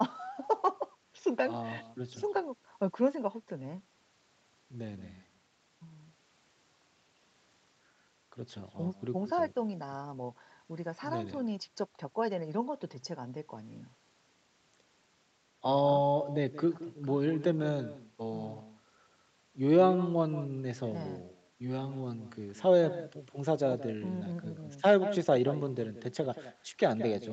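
Speech carried over a call, with echo with no canceller running through the whole clip. The far end's loudspeaker feeds its microphone, and nothing removes it. Each phrase returns about a fifth of a second later, roughly 15 dB quieter and thinner. The audio stops near 8 kHz, which fits a wideband call path.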